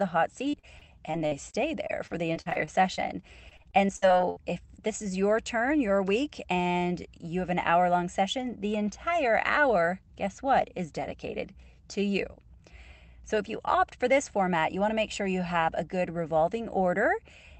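From 0.49 to 2.99 s and again from 3.49 to 4.38 s, repeated packet loss makes the speech choppy and robotic. Fourteen, then seven, short holes (longest 48 and 62 ms) are patched by extending the preceding sound, showing as smeared, repeated frames and brief dropouts under the 8 kHz call-codec ceiling.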